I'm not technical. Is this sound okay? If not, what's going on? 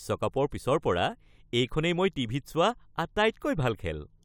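Yes, no faults heard.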